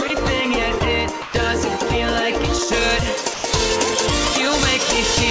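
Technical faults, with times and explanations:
0.08–0.10 s, 1.22–1.34 s and 3.34–3.44 s: sound dropped by the voice detector. The sound gives way to soft steady noise for 20, 120 and 100 ms, likely comfort noise after gating, not the glitchy repeats of packet-loss concealment.
2.73–5.30 s: pre-emphasis left on. A 75 µs treble boost, about 14 dB at 10 kHz relative to 1 kHz, is never undone, so the sound turns thin and hissy up to the 8 kHz ceiling of the G.722 call path. It starts abruptly, unlike a fixed equaliser setting.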